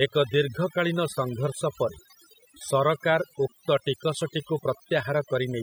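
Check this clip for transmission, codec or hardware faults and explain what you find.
The one fault here isn't really transmission or hardware. It's overdone noise removal, present throughout the speech. A noise reduction stage was pushed too hard, so any frequency band sitting close to its noise estimate gets pulled way down or switched off, and the quieter parts of the voice get caught too. You hear the background drop and break up into little twinkling specks.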